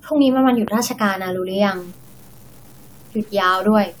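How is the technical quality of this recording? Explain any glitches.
The recording has two clear technical problems: a single pop early on, and a grainy, coarse quality that sets in partway through and lasts to the end.

Loud pop, at 0.68 to 0.70 s: a sudden voltage pulse, likely from a plug, switch, static discharge or driver glitch, was added to the signal. It is heard as one sharp pop peaking roughly 10 dB above the speech, which carries on underneath.

Low bit depth without dither, from 1.76 s to the end: the signal has been cut to very few bits, which fits about 7, by truncation with no dither. The error therefore tracks the speech and sits around 30 dB below it, heard as gritty distortion that shifts with each sound and is most audible on quiet passages.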